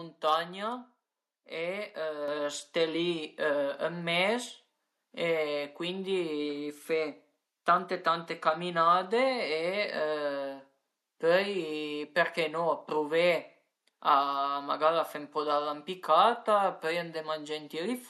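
At 2.28 s the speech and the background noise under it jump louder together, by about 7 dB, in a single step. That is the microphone volume stepped up: the call software judged the input too quiet and raised the device's gain at once.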